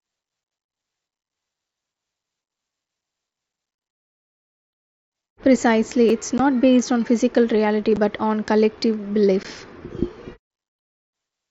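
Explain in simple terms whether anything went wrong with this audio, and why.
Unconcealed Bluetooth headset packet loss: sound packets dropped between headset and phone, leaving abrupt silent holes from 0.44 to 0.46 s, at 6.38 s just before "based on physical reality", at 7.96 s just before "on collective", and at 9.43 s just after it.

Repeated buffer: at 6.09 s the device ran short of new audio and replayed the last 5.3 ms twice, fitting a 256-sample buffer, heard as a brief click-like stutter.

The wideband mSBC headset link adds only light graininess.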